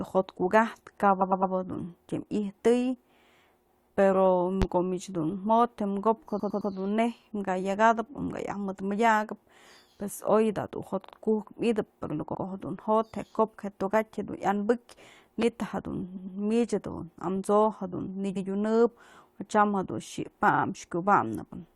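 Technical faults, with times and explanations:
1.20–1.52, 6.39–6.71, 11.04–11.12, 12.34–12.42, 16.16–16.37, 18.36–18.46 and 20.53–20.62 s, repeated frames: a chunk of 43 to 107 ms replays one to three times, a stutter, adding 85 to 320 ms. Unlike a pop, the speech itself repeats and the timeline stretches.
4.62–4.65 and 15.42–15.45 s, loud pop: a single sharp pop about 15 dB above the speech, likely a voltage spike from a plug, switch or static discharge. The speech carries on unbroken beneath it, with no repetition and no added time.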